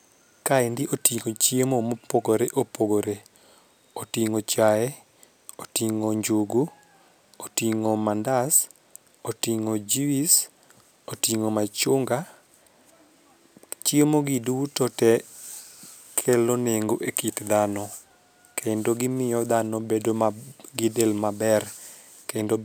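Imaging from linear upsampling runs through the whole speech clip. The rate was raised by straight-line interpolation between samples, which fits a step from 22 kHz to 48 kHz. That dulls the top of the band and leaves a mirrored copy between about 11 kHz and 22 kHz, roughly 20 dB down, heard as a faint metallic shimmer on sibilants.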